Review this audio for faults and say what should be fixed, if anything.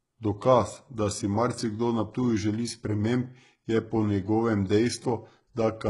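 Throughout the speech, the treble sounds synthetic, which points to HE-AAC compression, likely at a very low bitrate near 12 kbps, with heavy damage. The upper band is rebuilt by copying lower bands upward rather than coded, so sibilants turn gritty and lispy, and nothing is present above 11.1 kHz. A plain low-pass filter would simply dull the top instead, with no metallic, misaligned brightness. Encode at a higher bitrate, or use AAC-LC, to prevent it.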